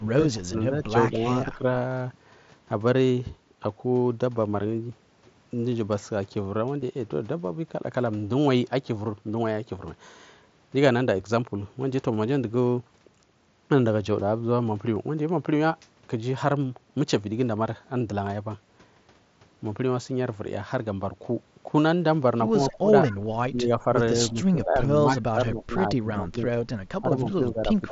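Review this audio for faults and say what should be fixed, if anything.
Speech suppressed in double talk at 0.0–0.55, 0.93–1.64, 22.74–22.92, 23.5–23.88, 24.31–26.44 and 27.01–27.91 s: the speech dips by roughly 10 to 20 dB in pieces, deepest near the start and across 24.31–26.44 s. The likely cause is the echo canceller mistaking overlapping far-end talk for echo and attenuating everything. Better double-talk detection, with gentler suppression during overlap, would prevent it.

Concealed Bluetooth headset packet loss at 6.81 and 14.95 s: gaps of 15 ms and 7.5 ms, which fit two lost frames and one lost frame, are filled by repeating recent waveform. A cleaner radio link between headset and phone, with less interference and a shorter distance, would prevent it.

Echo leak at 22.7–22.74 and 23.07–23.16 s: brief scraps of a copy of the speech return about 162 ms late, at roughly 30 dB and 20 dB below the speech. 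These are likely loudspeaker pickup that the far-end canceller failed to remove, beneath the light grain of the mSBC headset codec. Fixing the far end's echo cancellation, or having it use a headset, would prevent it.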